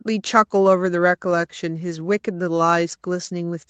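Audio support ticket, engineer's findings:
Findings: no faults in this speech recording; nothing above 8 kHz, as expected from the call microphone processing and the Opus WebRTC call path.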